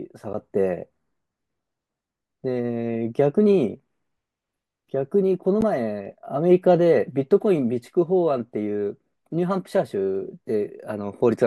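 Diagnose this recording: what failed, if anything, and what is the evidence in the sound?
The speech carries two blocks of digital silence, at 0.33 s and 5.61 s, each about 11 ms long and heard as a sharp tick. The fault likely sits at the driver or buffer stage. The output buffer was likely not filled in time, so zeros went out instead of audio. The gap length fits a 512-sample buffer. On the waveform, each is a near-silent stretch with abrupt edges. On the spectrogram, each is a narrow empty column.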